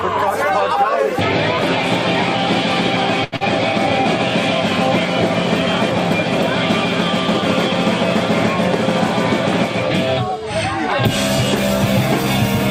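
At 3.24 s there's a short stall from a late packet. The packet wasn't there on time, the jitter buffer ran dry, and the receiver held the last bit of sound for about 80 ms until it showed up. Nothing's actually lost, but the sound hangs a beat too long, with a faint buzz or dip, and everything after it runs about 80 ms late.

Right after, from 3.36 to 3.43 s, comes a short concealed packet loss. About 40 ms of audio never reached the decoder in time, so the receiver papered over it by carrying the previous sound forward for roughly 43 ms and blending back in. It comes across as a quick smear or wobble, and anything very brief in that spot can drop out.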